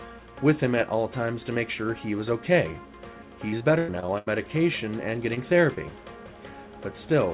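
Repeated packet loss (robotic sound) runs from 3.48 to 4.28 s. Six dropouts in quick succession, the longest about 98 ms, were each patched by extending the preceding sound, so about a third of that stretch is synthetic fill and comes out choppy. Short concealed packet loss follows at 5.34–5.38 s and 5.74–5.78 s. About 20 ms went missing each time, and the receiver bridged it by continuing the last sound before blending back, leaving a brief smear or wobble. All of it sits on narrowband call audio with nothing above 4 kHz, consistent with a G.711 A-law codec.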